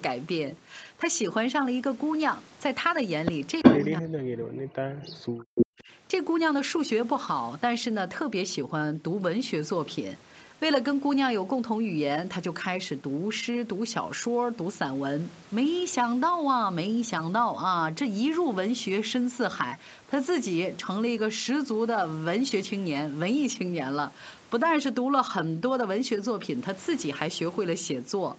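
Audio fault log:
3.63–3.79 s and 5.55–5.83 s, echo leak: A short, late copy of the speech surfaces behind the talker. The first scrap trails by about 350 ms and is fainter, roughly 15 dB down. The second, around 260 ms behind, stands out more strongly, roughly 5 dB down. The likely cause is a far end playing the call over a loudspeaker whose echo canceller left part of the microphone pickup in place, so that residue travelled back into the call.
3.89–5.53 s and 5.76–5.9 s, speech suppressed in double talk: The talker's level sinks while the other side is also speaking. In the longer stretch, roughly one and a half seconds are affected, with the deepest dip near 40 dB. The brief later one dips by around 20 dB. This is likely an echo canceller unable to tell the near talker from loudspeaker echo, so it pulled down both together.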